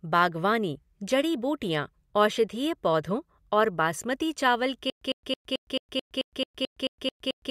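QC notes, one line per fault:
4.90 to 7.5 s: stutter with silent gaps. A 104 ms burst repeats twelve times, each followed by 115 ms of silence. A stalled stream is the likely cause.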